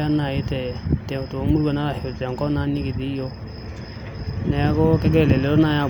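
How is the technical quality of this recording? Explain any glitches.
No glitches to explain: the speech recording holds steady throughout, with no audible faults.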